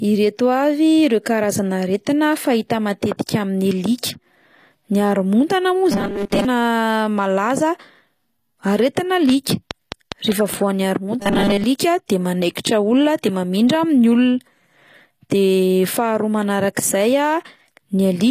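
Throughout the speech there is plainly audible codec damage, most likely from HE-AAC compression at a rate that fits roughly 24 kbps. The upper band is not carried directly but rebuilt by copying lower bands upward, so the treble does not match the original and the s sounds come out gritty and metallic. A spectrogram shows a hard ceiling at 14.9 kHz, with the treble below it looking like a smeared, repeated copy of the band beneath, whose harmonics fail to line up across the crossover.

From 5.92 to 6.45 s the speech turns into a rigid, metallic drone: robotic sound from repeated short buffers, likely caused by audio arriving too seldom and the gaps being filled by replaying the last slice, here about 5 ms long. Most of this stretch is repetition, which imposes a 200 Hz buzz. The waveform shows one short cycle repeating, and the spectrogram shows flat harmonic lines at multiples of 200 Hz.

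Between 9.29 and 10.55 s a train of clicks ticks over the sound: roughly seven near-identical pulses at a regular 4.8 per second, standing about 15 dB above the speech. They likely come from interference or a faulty connection. Each click appears as a sharp spike in the waveform and a thin vertical broadband line on the spectrogram, evenly spaced.

The same robotic buzz returns from 11.20 to 11.64 s, again at 200 Hz, and again likely caused by short repeated buffers filling gaps in the audio. It shows the same flat 200 Hz harmonic lines.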